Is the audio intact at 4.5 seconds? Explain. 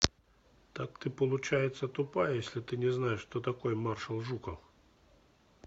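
Yes, at 4.5 seconds the speech plays through cleanly, with no dropout, click, distortion or other fault at that moment.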